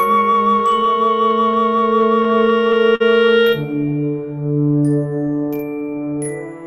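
A short music clip, and it's got a clock drift problem between sender and receiver. The sending end's clock seems to run slow, roughly 4 percent behind, so the receiver keeps running short of material, and that unevenness sits under the whole clip. You hear it as repeated timing corrections from about 0.10 s to 6.48 s. The receiver keeps repeating tiny slices to fill in, so the music plays at about 98 percent speed and gains something like 150 ms overall. On top of that there are scattered short gaps between 0.60 s and 3.02 s, around ten of them. Each was papered over by stretching the preceding sound, about a tenth of a second in total, the longest around 50 ms. They come through as little ticks and smeared moments, not outright dropouts.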